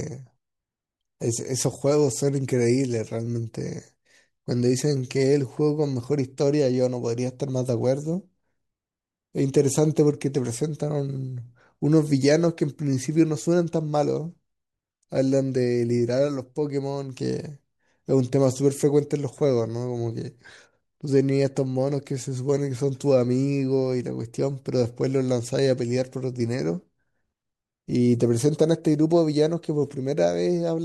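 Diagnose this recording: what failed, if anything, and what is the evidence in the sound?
Nothing in the recording points to a failure at any stage of the chain. No stage can be singled out for diagnosis, because the sound gives no evidence of anything going wrong.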